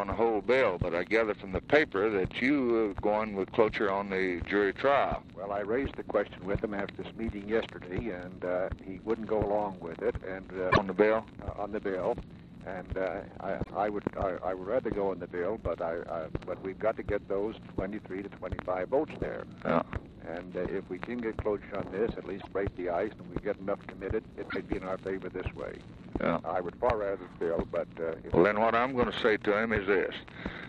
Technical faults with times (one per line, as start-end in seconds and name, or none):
10.70-10.78 broken MP3 bit reservoir
13.62-13.69 broken MP3 bit reservoir
22.40-22.47 broken MP3 bit reservoir
24.49-24.56 broken MP3 bit reservoir